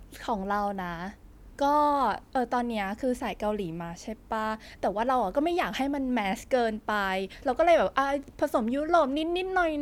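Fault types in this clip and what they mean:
No audible faults detected.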